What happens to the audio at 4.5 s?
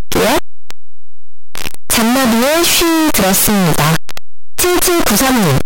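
At 4.5 s the speech is buried in a loud, harsh distortion. It is not a brief event. The same fault runs through the whole clip. The likely cause is signed and unsigned mixed up: 8-bit samples read with the wrong sign convention, so the top bit flips. Every zero crossing then leaps across the full range. Quiet moments come out as loud as the rest.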